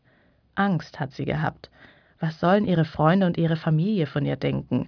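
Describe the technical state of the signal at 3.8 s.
At 3.8 s the signal is intact, with no audible fault at that moment.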